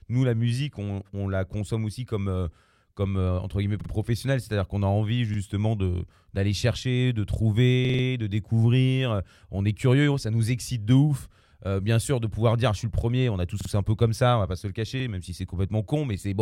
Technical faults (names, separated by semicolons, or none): repeated buffer